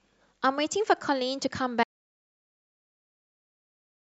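At 1.84 s the speech cuts off abruptly into an audio dropout to silence that lasts to the end. The gap is silent with no room tone, likely because the input signal was lost while the recorder kept writing empty samples.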